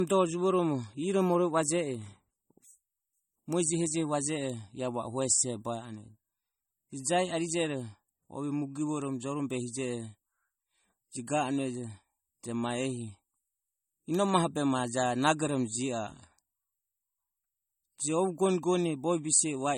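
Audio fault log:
throughout, low-bitrate audio saved at a high bitrate: the speech carries the swirly, smeared highs of heavy MP3 coding and nothing above 17.2 kHz, likely an earlier pass near 32 kbit/s re-encoded at 320 kbit/s, which cannot restore what was discarded.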